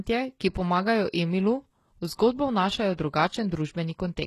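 From start to finish the speech carries heavy coding damage that is likely HE-AAC compression, and the very low bitrate it suggests fits a stream of around 16 kbps. The lower band is coded sparsely, and the treble above it is synthesised by copying lower bands upward, so sibilants come out gritty and metallic, even lispy, rather than simply dull. Nothing survives above 12.3 kHz. That coarse but still bright upper region, with harmonics that fail to line up, separates it from a plain low-pass cut.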